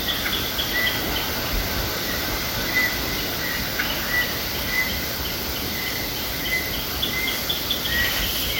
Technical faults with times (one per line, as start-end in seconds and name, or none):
0.00-8.60 resampler restarted on every block